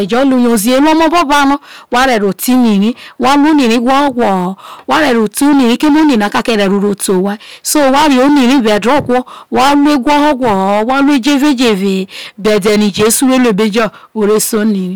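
From start to finish the speech suffers hard clipping, driven roughly 17 dB past what the signal chain could pass, so about a third of the samples were cut flat at that limit. Each loud syllable has its peaks sheared flat, producing a harsh, buzzy fuzz rather than occasional crackle. On a waveform the envelope looks like a solid block with squared-off tops; a spectrogram shows dense harmonic smearing reaching far up into the high kHz range on every voiced stretch.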